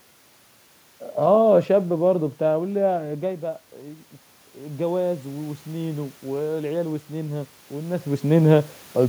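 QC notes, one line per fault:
4.57–8.33 s, automatic gain rising: the input drops about 12 dB, so the AGC slowly brings it back up about 6 dB, lifting voice and room noise together.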